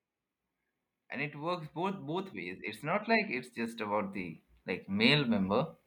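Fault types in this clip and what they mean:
Automatic gain rising: the gain control judges the input too quiet and slowly turns it up, here by about 11 dB between 1.73 and 5.39 s. The background climbs along with the speech, which rules out a talker simply moving closer to the microphone.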